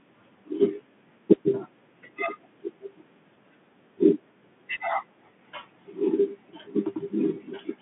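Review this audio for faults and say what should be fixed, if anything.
Bluetooth CVSD headset codec throughout: speech is confined to roughly 150 Hz–3.5 kHz, nothing above 3.8 kHz, with plainly audible one-bit delta-modulation grit, scratchy sibilants, and granular hiss. Prevent it by recording through a wideband path, such as a wired microphone or a headset using a wideband Bluetooth profile.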